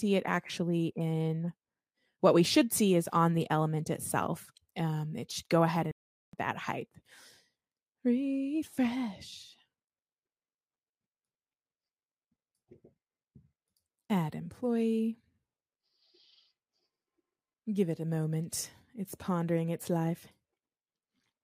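At 5.91 s the sound halts abruptly for 0.42 s, a playback stall, likely the player running short of data or its thread being blocked, then resumes at 6.33 s. The waveform shows a flat gap and the spectrogram a blank vertical band.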